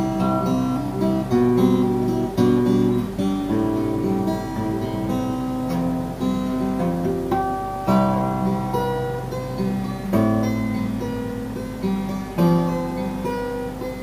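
Video or display buzz runs throughout. A screen or video cable leaks into the audio, giving a 50 Hz buzz with hash and a 15.6 kHz line tone, roughly 15 dB under the sound.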